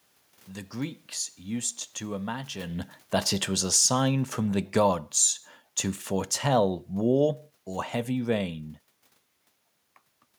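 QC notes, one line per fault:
3.49–5.08 s, automatic gain falling: after "to imagine that it", the gain control lowers gain by about 3 dB, so speech and room noise sink together.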